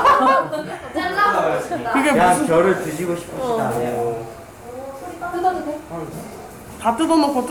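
No technical faults can be heard anywhere in this recording of sounds. Nothing in it calls for a fault to be described.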